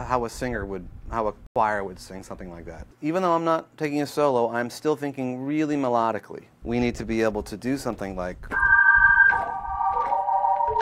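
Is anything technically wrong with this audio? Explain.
Yes. A corrupt frame is muted from 1.47 to 1.56 s: damaged compressed data was rejected by the decoder and replaced with silence, giving an abrupt 0.09 s hole that points to one lost frame, with timing intact. Waveform and spectrogram show a sharp-edged blank gap.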